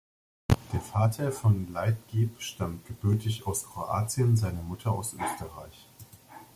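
No technical faults can be heard anywhere in the recording. The speech continues without any interruption or disturbance that would point to a problem in the signal chain.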